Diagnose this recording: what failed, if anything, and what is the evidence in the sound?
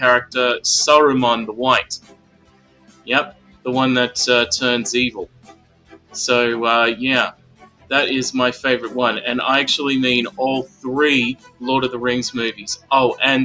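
A speech-oriented noise suppressor in the call processing was left running on non-speech material. It treats sustained tones and decaying tails as noise, so the level swings by roughly 15 dB as attacks pass and held sound sinks, giving a pumping, thinned texture with nothing above 8 kHz.

The same stage produces distinct sound cut by the noise suppressor at 1.98–3.09 s, 3.26–3.66 s, 5.26–6.15 s, 7.32–7.91 s, 10.65–10.85 s, 11.34–11.63 s and 12.52–12.91 s. Sustained sound drops by about 15–18 dB in these spans, and the decays are cut short.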